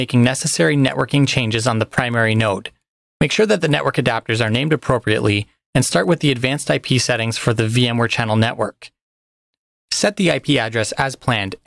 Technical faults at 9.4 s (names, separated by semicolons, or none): resampler restarted on every block